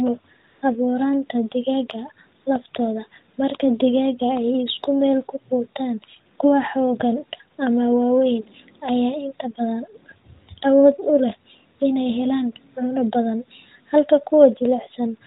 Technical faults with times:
0.48-0.62 AMR comfort noise
2.42-2.46 AMR comfort noise

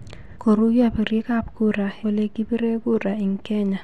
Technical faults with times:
0.35 compressed frames skipped
2.02 compressed frames skipped

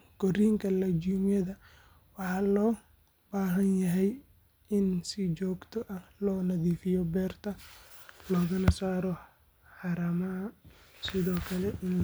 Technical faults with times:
none

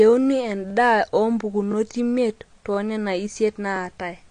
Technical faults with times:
0.00-4.30 AAC compression
0.70-0.72 overlapping chunks
1.72-1.74 overlapping chunks

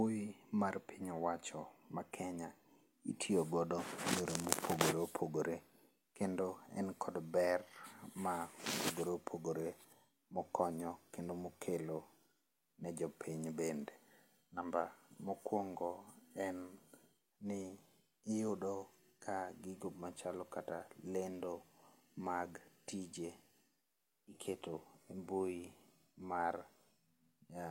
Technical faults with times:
none

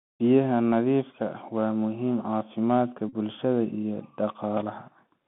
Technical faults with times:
0.00-5.27 Bluetooth CVSD headset codec
3.09-3.14 Bluetooth headset packet repeated

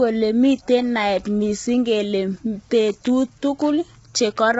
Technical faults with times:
0.00-4.59 low-delay AAC compression

